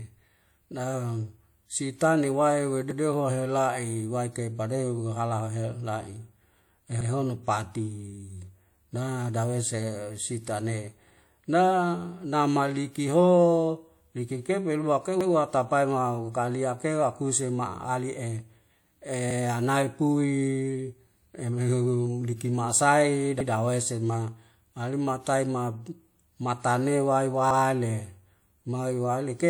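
Speech with overlapping chunks: a 100 ms stretch replays at 2.91, 7.01, 11.11, 15.21, 19.31, 23.41 and 27.51 s, roughly every 4.1 s, as 4 s blocks restart early. The waveform shows a repeated segment and a discontinuity at each join, while a spectrogram shows duplicated slices with a thin vertical click line.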